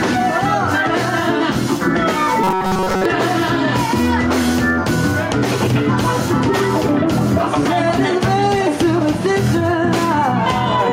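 The clip carries robotic sound from repeated short buffers between 2.44 and 3.05 s. Across that span the audio turns rigid and metallic. A steady buzz near 188 Hz sits on top of it. That pitch matches a segment about 5.3 ms long being played again and again. The likely cause is new audio arriving too slowly, so the last short buffer is repeated to fill the gap. Roughly two-thirds or more of the span is filled this way, and the real audio there is skipped.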